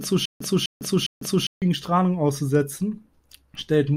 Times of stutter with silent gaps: 0.00-1.62

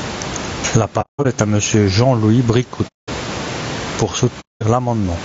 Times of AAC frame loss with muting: 1.01-1.26, 2.87-3.09, 4.40-4.63

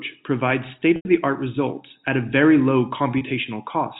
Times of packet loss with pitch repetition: 0.96-1.05, 3.18-3.21

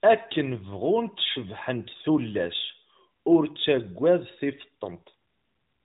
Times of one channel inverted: none

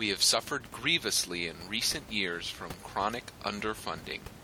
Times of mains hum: none

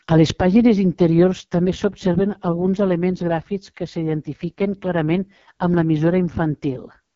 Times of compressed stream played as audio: none

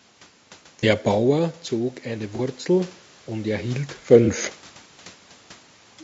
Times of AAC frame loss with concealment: 0.80-0.84, 2.36-2.40, 4.25-4.29

